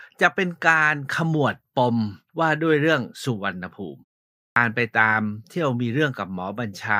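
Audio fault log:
4.50–4.56 s, clipped start after a pause: output wakes late after a 0.54 s silence and swallows 62 ms of onset; the waveform jumps abruptly from flat into mid-sound speech.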